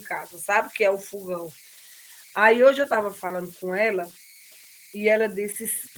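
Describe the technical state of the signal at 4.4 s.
At 4.4 s the speech carries converter idle tones. They run through the whole clip, so this moment is no exception. A delta-sigma converter working without dither settles into repeating bit patterns when its input is small. Those patterns sound as a whistle around 2 kHz, sitting about 26 dB below the speech. It shows most in pauses and as grain under the speech. The Opus layer is audible only as light coding, with the band reaching about 20.1 kHz.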